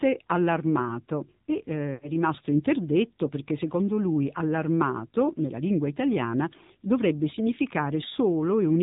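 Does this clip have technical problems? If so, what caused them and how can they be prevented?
Yes. The whole clip passed through the AMR narrowband mobile codec at a low bit rate, plausibly around 7.4 kbps. Nothing above 4 kHz survives, and the speech sounds plainly buzzy and synthetic. Sending it over a wideband codec or at a higher AMR mode would prevent this.

From 1.94 to 2.11 s there are lost AMR speech frames. The decoder repeated its last good settings at falling gain, so the speech smears and fades for about 80 ms, consistent with four lost 20 ms frames. Better radio coverage or stronger error protection on the link would prevent it.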